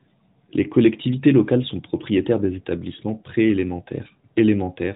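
No technical faults can be heard in the speech, which comes through the AMR narrowband mobile codec at 12.2 kbps, carrying only light coding damage and nothing above 3.8 kHz.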